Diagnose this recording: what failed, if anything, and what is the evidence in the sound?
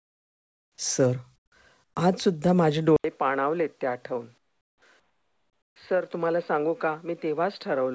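Comfort noise in place of the background appears at 0.00–0.78, 1.36–1.52, 1.84–1.96, 4.38–4.82 and 5.00–5.76 s. Each pause drops to a steady, featureless hiss about 9 to 17 dB quieter. The likely cause is discontinuous transmission in call processing, with the receiver synthesising noise.

Input switched to a poorer device at 2.96 s. After an 80 ms silence, everything above 4.8 kHz is gone, compared with the 8 kHz call-codec ceiling before it. The level drops a few dB over a new noise floor, likely from a driver-level change to another microphone.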